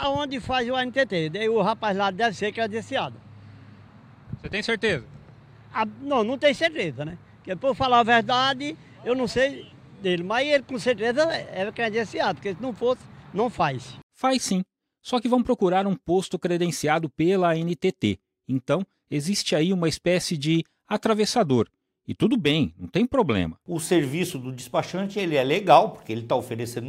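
No technical faults can be heard anywhere in the recording. The audio runs without any break, glitch or disturbance that would point to a problem in the chain.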